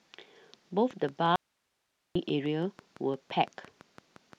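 A train of clicks runs from 0.91 to 4.34 s: about twenty evenly spaced pops at 5.84 per second, peaking near the speech level, likely from electrical interference or a faulty connection.

An audio dropout to a faint residue runs from 1.36 to 2.15 s: the speech cuts off abruptly for about 0.8 s, leaving only hiss roughly 50 dB down, likely from a lost signal on a still-live path.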